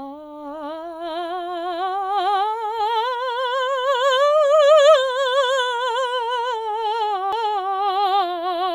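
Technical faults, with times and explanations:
7.32 s, CD skip: the music cuts out for only a few milliseconds with a small tick, then carries on from a different point. A jolt or disc flaw threw the laser onto another turn of the spiral, so playback resumed elsewhere.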